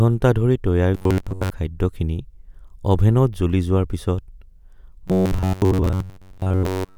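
From 0.95 to 1.50 s and again from 5.08 s to 6.97 s, the speech turns into a rigid, metallic buzz near 94 Hz, robotic sound from repeated short buffers. Audio likely arrived too seldom, so a roughly 11 ms chunk was repeated over most of the time.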